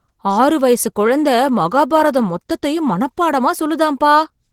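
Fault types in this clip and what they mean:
Opus voice compression: The speech sounds plainly hoarse, grainy and slightly robotic throughout, though the band still extends to about 20.2 kHz. This fits Opus in hybrid mode, with SILK linear prediction below 8 kHz and CELT above, coding the excitation coarsely at roughly 16 kbps.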